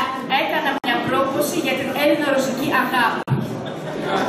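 At 0.78 s the sound drops out for about 57 ms, then again at 3.23 s for about 46 ms: a gap at a join of encoded pieces, where encoder start delay and end padding stayed in. Both holes have smeared edges and resume mid-flow.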